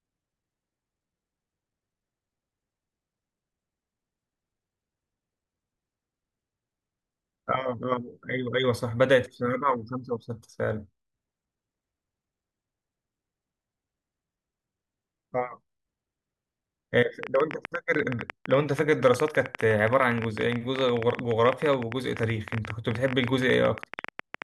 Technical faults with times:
17.23-24.43 train of clicks

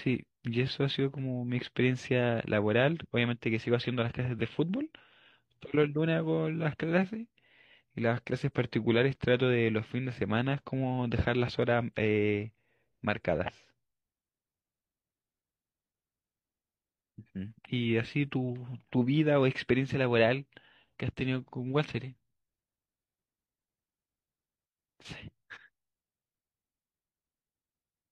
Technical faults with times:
10.62-14.63 periodic USB or driver dropouts

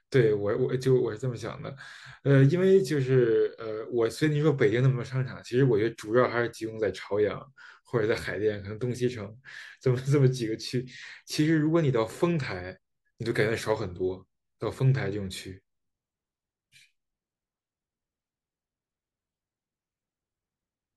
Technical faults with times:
none

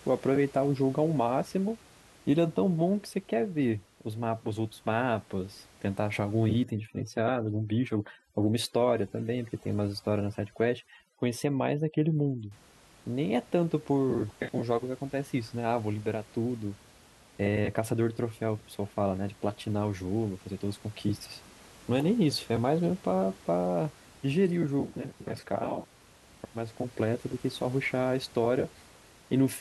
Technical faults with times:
6.64-12.51 overdone noise removal

